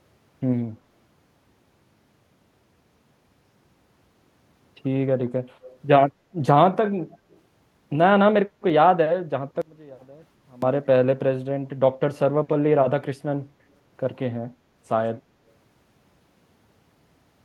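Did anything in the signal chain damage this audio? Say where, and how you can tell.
Yes. At the call-processing stage, the far end's echo canceller likely let some of its loudspeaker pickup through. This echo leak shows up as a faint delayed copy of the speech, 199 ms behind, at 5.64–5.77 s and more weakly at 7.32–7.36 s.

Between 9.62 and 10.62 s, one channel inverted, most likely a polarity flip in the wiring or mixing stage, makes the shared centre content cancel when the channels are summed to mono. The speech drops by about 22 dB, leaving only a faint residue.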